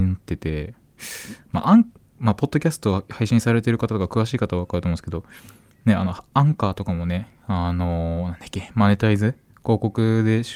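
No technical faults can be heard anywhere in the speech.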